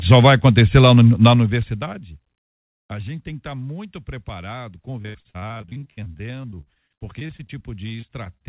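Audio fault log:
5.02–7.51 s, repeated packet loss (robotic sound): right after "estar tá muito preparado", packets keep going missing, and about 30% of the span is patched by stretching the last sound. That leaves choppy speech with gaps up to 80 ms.
8.01–8.46 s, repeated packet loss (robotic sound): five more short dropouts, up to 30 ms each, are filled by repeating the last sound. The final stretch sounds choppy.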